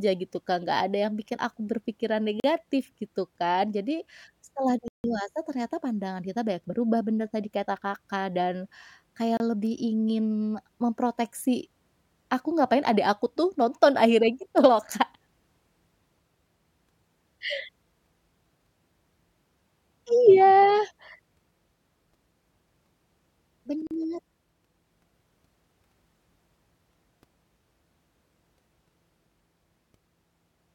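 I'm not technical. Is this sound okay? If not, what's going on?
No. The speech has four blocks of digital silence, where the audio drops to silence and back instantly: at 2.40 s and 23.87 s (40 ms each), 9.37 s (about 30 ms), and 4.88 to 5.04 s (160 ms). The short ones sound like short holes; the longest is a longer hole. These usually happen when the software fails to deliver audio in time.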